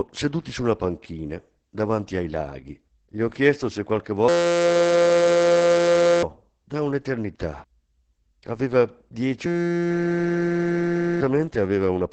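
From start to finish the speech carries Opus voice compression in its SILK speech mode. Nothing sits above about 8.7 kHz, and the voice is muffled, hoarse and slightly robotic, which points to heavy coding near 10 kbps. The damage is steady, not a sudden dropout.

At 4.28 s, right after "ho chiesto se qualche", a system hang loop takes over until 6.23 s, just before "da un'eternità". A 5.8 ms slice repeats exactly, giving a steady 172 Hz buzz. The whole thing sounds like a 256-sample buffer replaying while the system froze, and about two seconds of speech are lost. The same buzz returns from 9.46 s to 11.21 s. Unlike a stutter or a dropout, it is a pitched tone with no gaps.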